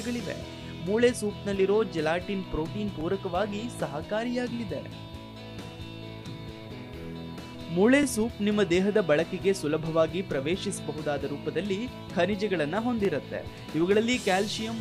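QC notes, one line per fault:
3.01–3.03 s, 8.03–8.05 s and 13.05–13.07 s: overlapping chunks. The audio was handled in 5.0 s chunks, and each new chunk begins 20 ms before the previous one finished, so that short stretch plays twice at every join. The doubled fragment breaks the waveform's continuity, giving a brief click or stutter that returns at a steady 5 s spacing.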